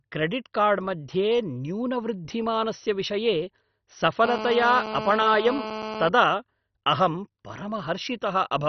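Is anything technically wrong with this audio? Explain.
Yes. Throughout the speech, nothing is heard above 6.1 kHz, and the remaining bands gurgle and flicker with granular distortion. The likely cause is heavy MP2 compression: Layer II sub-bands starved of bits are switched off or coarsely quantised, which fits a rate near 32 kbps. Plain low-pass filtering would be dull without the granular distortion.

From 4.25 to 6.09 s there is GSM phone buzz: a hard, raspy 217 Hz tone rich in harmonics, about 8 dB below the speech, as the audio circuit rectifies a nearby handset's radio bursts. It stays steady throughout, as during a call. Mains hum would sit on 50 or 60 Hz multiples and sound smoother.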